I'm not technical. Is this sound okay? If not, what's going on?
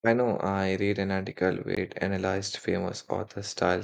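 No. A CD skip at 1.75 s: the player's laser jumped to a different spot on the disc, giving a tiny click and brief silence before the speech resumes elsewhere.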